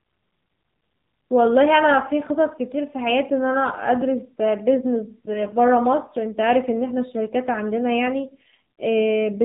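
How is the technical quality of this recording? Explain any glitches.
The recording has clear technical damage: the whole clip passed through a low-rate mobile codec, and near the end a short burst of corrupted data roughens the voice.

AMR narrowband mobile codec, throughout: The speech was coded as AMR-NB, and the thin, buzzy character fits a low mode around 7.4 kbps. With 8 kHz sampling, nothing above 4 kHz survives, so the voice sounds muffled and boxy. The sparse pulse model gives it a synthetic, plainly buzzing edge.

AMR bit errors, 8.79 to 8.82 s: A weak link flipped a few percent of the less protected bits across a handful of frames. The excitation pulses landed in the wrong places and the fine gain and spectral values drifted. For this brief stretch the voice keeps its pitch and level but turns hoarse and gargly.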